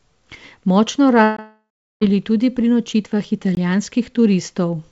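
Speech carried over a call link whose band stops at 8 kHz, consistent with a G.722 path at 64 kbit/s, has two kinds of fault. From 1.24 s to 2.03 s there is a long network dropout, likely from packets that never arrived. The last sound is stretched into a fading buzz, then about 0.37 s of near-silence follows, and the audio resumes at "tudi pri nočitvah" with the missing stretch simply gone. On a spectrogram it appears as smeared, decaying energy and then an empty band. Two 20 ms blocks of digital silence, at 1.37–1.39 s and 3.55–3.57 s (the second just after "tudi pri nočitvah"), are each heard as a short hole. They show as flat gaps in the waveform with abrupt edges, likely where the output buffer went unfilled.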